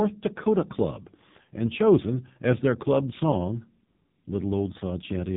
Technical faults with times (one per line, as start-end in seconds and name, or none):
0.00-5.36 AMR narrowband mobile codec